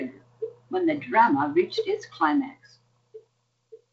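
Nothing stood out as a technical problem on listening to this speech recording.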